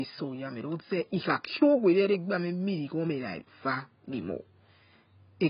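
Speech that sounds dull and smeared throughout, with a warbling, fizzy texture on sustained sounds and sibilants and nothing audible above 5.1 kHz. The likely cause is heavy AAC compression, with AAC-LC lowering its cut-off and starving bands, which fits a bitrate near 16 kbps.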